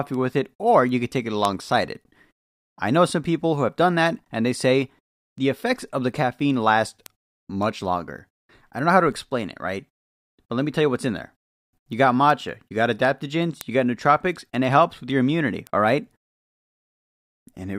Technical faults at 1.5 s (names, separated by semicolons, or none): word clock ticks